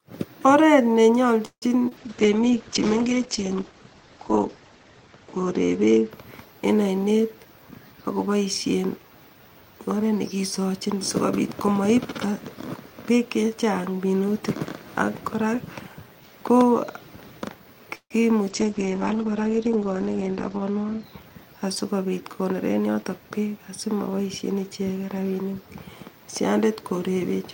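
A speech recording with network faults throughout. Two call audio freezes, at 1.45–1.70 s and 17.95–18.13 s, stretch the last sound into a fading buzz of about 160 ms, the final 70–80 ms near-silent. Likely cause: delayed packets draining the jitter buffer. A spectrogram shows smeared, decaying harmonics, then a dark gap. Short concealed packet loss at 1.89–1.93 s fills a 20 ms hole with extrapolated sound, heard as a brief smear. The waveform shows a slight envelope wobble, and the spectrogram a short blur of repeated texture. Call bitrate drops at 1.99–7.09 s and 18.51–21.09 s cut the encoding from 40 to 9 kbps for roughly two to three seconds. The audio turns rough and muffled, and the spectrogram loses everything above 8 kHz. Jitter buffer speed-up trims pitch-period slices to reduce delay, hurrying the speech without changing pitch. It runs at 105% from 6.89 to 8.86 s and at 104% from 11.67 to 13.64 s, after "oret nekisochin sikobit". 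Then 110% at 20.52–21.21 s and 112% at 22.45–23.10 s. Each pass removes roughly 70–100 ms, visible as compressed syllable spacing.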